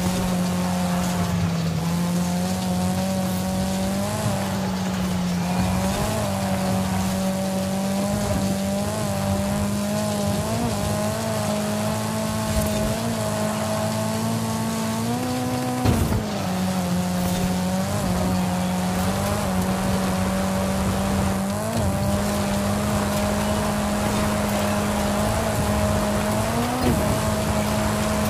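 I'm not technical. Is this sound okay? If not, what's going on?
Yes, this one sounds fine, with nothing going wrong anywhere in it, so there's nothing to worry about.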